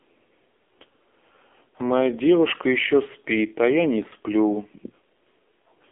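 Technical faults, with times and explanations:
Throughout: AMR narrowband mobile codec. The speech has no content above about 3.6 kHz and is thin at the bottom, sitting in a telephone-like band of roughly 250 Hz to 3.5 kHz. The codec models each 20 ms frame as a vocal-tract filter driven by a few pulses per 5 ms. Here the coding damage is heavy, giving a buzzy, synthetic texture. That level of damage fits one of the lowest AMR-NB modes, around 5.9 kbps.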